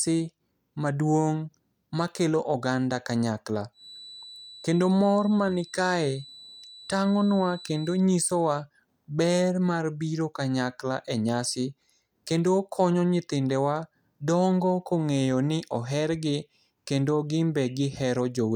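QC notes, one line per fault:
3.71 to 8.08 s, feedback whistle: a thin, steady tone at 4 kHz sits roughly 20 dB under the speech, swelling and fading slowly in level. Likely a speaker-to-mic loop hovering right on the edge of feedback, ringing at one frequency without taking off.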